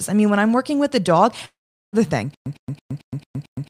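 A speech clip with two faults. Audio likely stopped arriving for about half a second, causing a long network dropout from 1.45 to 1.96 s, just after "working with the dog": the last sound smears into a fading buzz or hiss, then about 390 ms of silence, with roughly 480 ms of speech missing. From 2.34 s to the end, a stall likely makes the player replay its last 105 ms fragment, giving a stutter with silent gaps: the same burst repeats every 222 ms, separated by 117 ms of digital silence.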